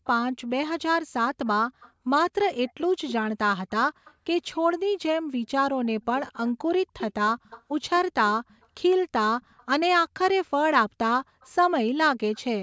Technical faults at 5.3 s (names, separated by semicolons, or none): none